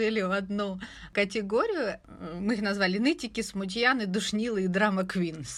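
No technical faults can be heard anywhere in this speech recording, and the signal holds steady throughout.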